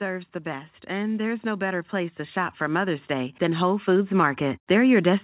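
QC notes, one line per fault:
0.43 to 5.23 s, automatic gain rising: The speech and background noise swell up together, steadily, right to the end. The automatic gain control judged the input too quiet and kept raising its gain. The narrow call sound, with nothing above 4 kHz, grows with it.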